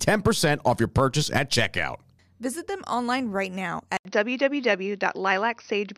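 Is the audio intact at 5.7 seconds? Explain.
No, from 3.97 s to the end, the speech turns dull and band-limited, with nothing above 6.1 kHz, after an 80 ms gap, likely an input switched to a poorer device.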